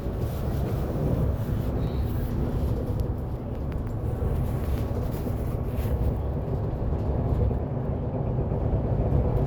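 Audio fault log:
Nothing stood out on listening to these sounds.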